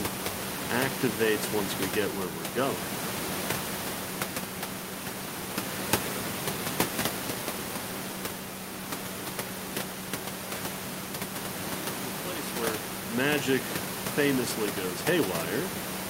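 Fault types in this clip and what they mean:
Nothing in this one counts as a fault, so there's nothing to list here.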